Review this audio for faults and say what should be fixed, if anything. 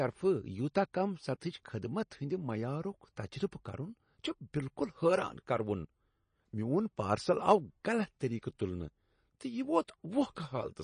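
Throughout, the speech sounds watery and swirly, likely MP3 compression at about 32 kbps. A spectrogram shows a hard ceiling at 9.8 kHz and flickering gaps beneath it. To prevent this, work from the uncompressed source or encode at a much higher bitrate.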